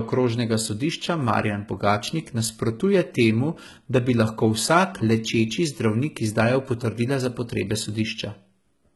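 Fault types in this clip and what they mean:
HE-AAC compression: The speech was likely squeezed through HE-AAC at a very low bitrate, around 16 kbps judging by the damage, so only the lower band is truly coded and the treble is synthesised from copied lower bands, leaving s sounds heavily gritty, metallic and lispy throughout.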